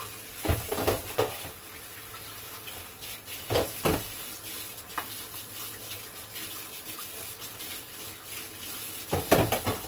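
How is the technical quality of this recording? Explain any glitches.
The technical quality is compromised by one fault that runs through the whole recording.

Opus compression, throughout: the encoder likely worked in its CELT music mode with too few bits, consistent with roughly 24 kbps. It preserved each band's energy but filled the starved bands with folded or noise content, so tones come out grainy, rough and noisy rather than clean. Bandwidth stays full, reaching about 20.2 kHz.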